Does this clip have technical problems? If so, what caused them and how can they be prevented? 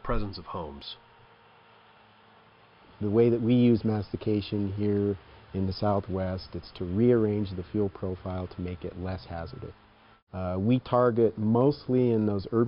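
No, nothing in this clip points to a capture, transmission or processing fault, so there is nothing to trace or prevent.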